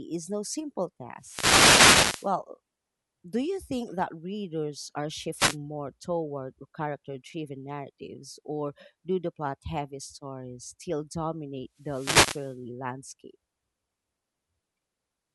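The analogue FM radio link from the wireless microphone fades as reflections cancel its signal, so receiver noise surges into the speech: wireless microphone noise hits as swishy static bursts from 1.19 to 2.33 s after "no simple", 5.36 to 5.57 s after "readers are", and 11.77 to 12.59 s after "heavy stories still dominate".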